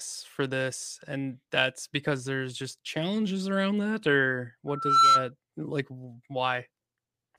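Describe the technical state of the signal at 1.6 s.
At 1.6 s the signal is intact, with no audible technical fault at that point in the speech.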